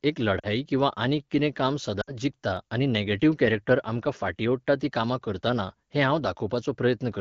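Lost AMR speech frames hit at 0.39 s and 2.01 s. The decoder fills each gap by reusing the last good pitch and vocal tract settings with falling gain. The gaps last 40 and 60 ms, which fits two and three frames. Each drops to near silence within two frames, and the voice comes back weak or rough for a moment.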